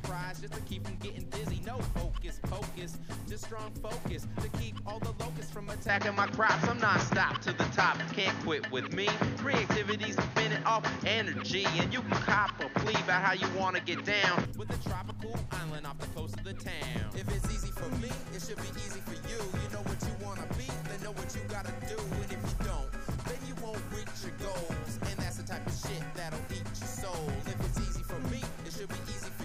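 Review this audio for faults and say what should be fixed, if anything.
Input switched to a poorer device, from 5.89 s to 14.45 s. With no gap at either switch, the sound suddenly loses everything above 6.6 kHz, turning duller, while its level shifts by about 5 dB and a new background noise appears about 30 dB below the signal. At 14.45 s the full band returns. This points to the recording input likely having been handed to a second, band-limited microphone or headset profile and then back. Lock the capture device and disable automatic input switching for the whole session.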